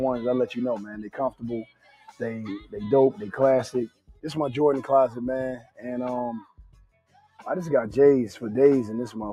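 From start to finish the level pumps and sustained parts thin out, swinging by around 10 dB. This is a speech noise suppressor applied to music or sounds, treating steady content as noise. Held or fading sound sinks sharply, by about 18 dB at 0.84 to 1.45 s, about 19 dB at 1.62 to 2.21 s, about 14 dB at 2.59 to 2.75 s, and about 20 dB at 3.88 to 4.25 s, 5.57 to 5.85 s and 6.4 to 7.45 s. Each is sound cut by the noise suppressor.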